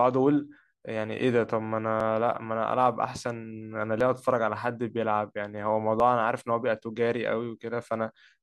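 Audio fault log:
2.00, 4.01 and 6.00 s: overlap between stream segments. At each of these points the audio jumps with a small click or skip, as a sliver of sound vanishes: about 17 ms at 2.00 s, 11 ms at 4.01 s and 9 ms at 6.00 s. The timing of consecutive segments overlapped, so the player discarded audio it took to be duplicated. The missing slice leaves a discontinuity in the waveform. The 2-second spacing matches the segment boundaries.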